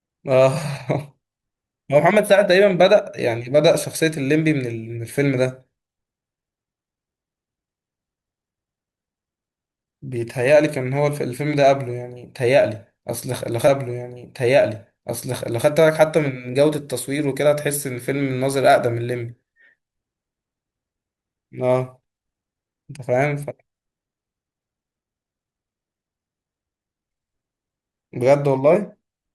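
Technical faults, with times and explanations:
13.67 to 15.67 s, stream segment repeated: two seconds of speech that have already played come round again, with a small blip at the jump back, and the clip gains 2 s in length. The player fetched or queued the same chunk of the stream twice. What sets it apart from a buffer stutter is the span: a whole two-second stretch recurs intact, rather than a short fragment looping rapidly, and nothing is missing around it as in a dropout.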